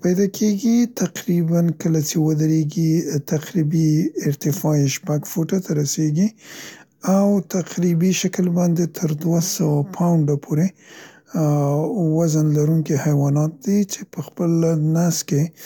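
No faults can be heard.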